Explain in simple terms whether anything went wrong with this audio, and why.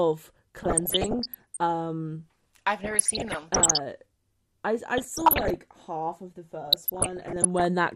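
MP2 compression affects the whole recording. The speech sounds dull and muffled, with a gurgling, grainy edge. The likely cause is the MPEG Layer II encoding used for digital radio. It divides the sound into narrow frequency slices, and when bits run short it shuts off the highest slices and stores the rest roughly. That removes the crispness and leaves this watery texture.

DAB burbling appears in four bursts: 0.57–1.57 s, 2.80–3.80 s, 4.97–5.56 s (right after "I I" and before "half of the"), and 6.67–7.65 s (just after "half of the"). During these bursts short blips of noise bubble through the sound. Weak reception let errors slip past the error correction, so wrong values put those blips of noise into single frequency slices.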